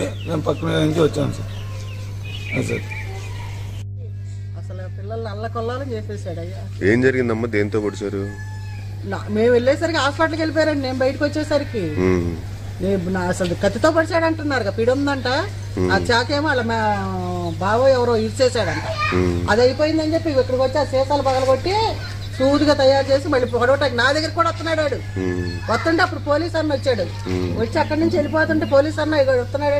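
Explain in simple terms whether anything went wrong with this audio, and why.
Mains hum runs through the whole recording. It is a steady, low buzz at 50 Hz, and it sits fairly loud under the sound. It happens when electricity from the power line leaks into the audio, usually through a ground loop or a nearby transformer.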